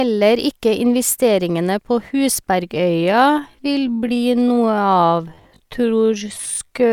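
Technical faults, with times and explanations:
2.66 to 6.93 s, time-stretched section: from 2.66 s to the end, the speech abruptly slows to about 0.61 times its earlier pace, yet its pitch does not drop. The likely cause is software stretching this part to fill a set length by repeating short slices of the sound. A plain slowed playback would lower the pitch along with the pace.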